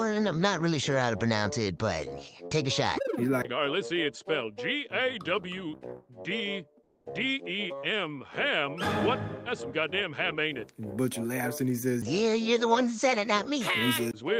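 The audio has two linked faults around the 7 s mark. From 6.83 to 7.05 s, a quiet stretch sits about 44 dB below the loudest parts, and the real background is replaced for 220 ms by comfort noise in place of the background: a smooth, detail-free noise about 4 dB quieter than what surrounds it. That points to discontinuous transmission, where the sender stopped sending during the pause and the receiver filled it with synthetic noise. It differs from a dropout or noise gate, which would leave near-silence, because here a steady noise bed continues. Right at the end of that stretch, from 7.01 to 7.05 s, the returning sound shows an onset clipped by the voice detector: its first 40 ms are missing, so it starts abruptly with no soft rise. The likely cause is that the detector reacted late and comfort noise covered those first moments. Unlike a fade-in or a lost packet mid-sound, only the beginning is cut, and it is cut cleanly.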